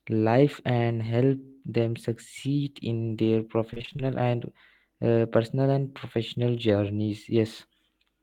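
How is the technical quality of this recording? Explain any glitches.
One brief glitch stands out. Right after "succeed in their", from 3.73 to 4.01 s, there's repeated packet loss (robotic sound): a rapid run of short dropouts, none longer than about 26 ms, each patched by stretching the previous sound. About half that stretch is filled in, so it sounds choppy.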